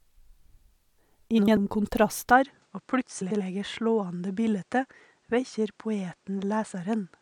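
At 1.38 s, frames arrive out of order until 1.57 s. Two neighbouring blocks of about 93 ms each play swapped. The stretch sounds like a garbled flutter. No time is lost.

From 2.31 s to the end, the sound turns duller and quieter. Nothing remains above 9.8 kHz. The level drops by roughly 5 dB. A faint new noise floor appears, around 40 dB below the signal. There is no gap at the change. The likely cause is an input switched to a poorer device.

At 3.21 s, frames out of order strike again, through 3.41 s. Two blocks of about 93 ms are exchanged. The same flutter returns, now through the narrower sound.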